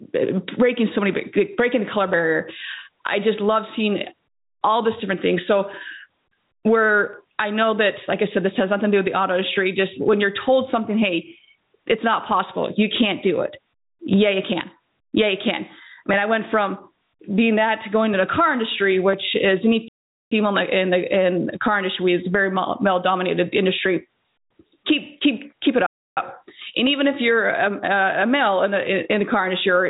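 Gain pumping runs through the whole clip: the background swells up in the gaps and then drops sharply as each loud sound arrives, a swing of roughly 15 dB. The likely cause is input gain set far too high, with a fast limiter clamping down on each peak. On a waveform, loud and quiet passages sit closer in height, and the noise floor visibly rises and falls between peaks. A spectrogram shows the background band brightening in the pauses and dimming under each loud event.

At 19.88 s a playback stall cuts the sound off mid-flow for about 0.43 s, until 20.32 s. A second stall at 25.86 s silences it for about 0.30 s, until 26.17 s. The likely cause is the player running out of buffered data or its thread being blocked. On a waveform these appear as flat, empty gaps with abrupt edges. On a spectrogram they are fully blank vertical strips across all frequencies. Outside them the sound is capped at 4 kHz, since nothing above that reaches the output through a call path that fits a 64 kbps G.711 A-law codec.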